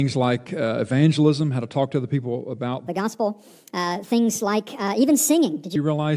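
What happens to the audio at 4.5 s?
A wrong sample rate runs from 2.88 s to 5.76 s, so 4.5 s falls inside it. The sound plays 1.45 times too fast and about 6.5 semitones high, which fits audio recorded at 22 kHz being played back at 32 kHz without conversion.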